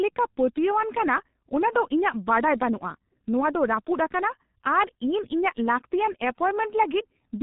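Throughout, heavy G.723.1 codec damage: the spectrogram stops at 3.8 kHz, and the speech sounds muffled and hoarse with smeared consonants, which fits 6.3 kbit/s.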